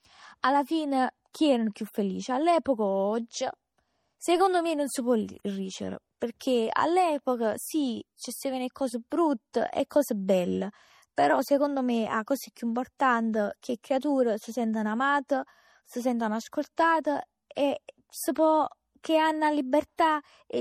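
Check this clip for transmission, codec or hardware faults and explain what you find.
Two codec faults are audible in this speech recording: compression damage throughout, plus three brief pre-echoes.

MP3 compression runs the whole length, and the damage is plainly audible. Nothing is present above 18.6 kHz, where the encoder cut the treble. Weak frequency lines flicker on and off between frames, giving a watery, swirling texture. The heaviness points to a low bitrate around 48 kbps, likely an MP3 encode. Unlike a simple low-pass filter, the swirl and chirpy sibilants show that bits were being rationed.

Pre-echo appears at 9.53 s, 11.16 s and 17.55 s. At each point, quantisation noise from a block containing a sharp onset leaks backward into the quiet just before it, spreading 13, 15 and 18 ms respectively. Each attack is preceded by a short hiss and lands softened. Unlike a click, the audible noise comes before the transient, where nothing loud masks it.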